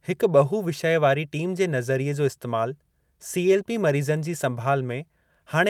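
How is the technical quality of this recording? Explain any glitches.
Nothing in this recording sounds like a glitch, with no dropouts, clicks or sudden jumps anywhere in it.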